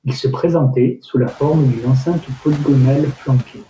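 Speech cut by the noise suppressor occurs at 2.05–2.39 s, after "sous la forme d'une", and at 3.44–3.64 s. Once the room noise rises near 1.5 s, the suppressor treats quiet speech as noise, dipping it about 13 dB and about 16 dB, so these parts sound faint and swallowed.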